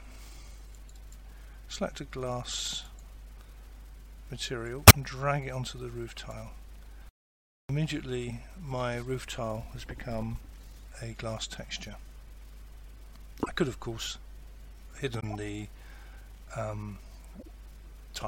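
Corrupt frame decoded at 4.87 to 4.95 s, 13.40 to 13.48 s, 15.20 to 15.27 s and 17.33 to 17.49 s: in this audio, damaged compressed frames were played rather than concealed, so misread gains and codes put energy at the wrong frequencies. Each event is a brief chirp or noise burst lasting roughly as long as the few frames hit, around two, four, three and seven frames. The first is the loudest, and each later one is quieter. Audio dropout to silence from 7.09 to 7.69 s: the sound cuts off for about 0.6 s into dead silence with no room tone, then returns mid-flow. Whatever was playing in that gap is lost. The likely cause is that the input signal was lost, whether through a disconnected device, a failed link or a stray mute, while recording carried on writing silence. Loose connector crackle from 10.53 to 10.73 s: an irregular burst of scratchy crackle, the sound of a worn or dirty contact rapidly making and breaking as it moves. 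That chops the signal into fragments and adds pops wherever DC sits on the line.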